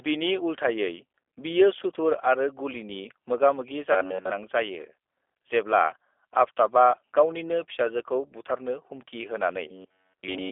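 G.729 codec coding runs through the whole speech recording. Nothing above 3.6 kHz survives, the band sits roughly between 300 Hz and 3.5 kHz, and the rebuilt voice sounds plainly rough and synthetic, which points to a low-rate 8 kbit/s predictive codec.

Robotic sound from repeated short buffers appears from 3.92 to 4.30 s, where essentially all of the audio turns into a rigid metallic buzz near 93.8 Hz. A fragment of about 10.7 ms is likely being replayed while fresh audio fails to arrive.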